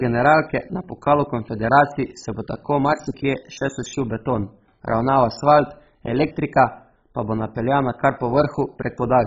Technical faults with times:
0.00-9.26 MP2 compression

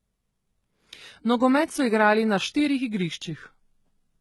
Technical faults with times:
0.00-4.20 HE-AAC compression

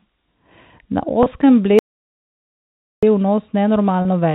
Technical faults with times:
1.79-3.03 audio dropout to silence

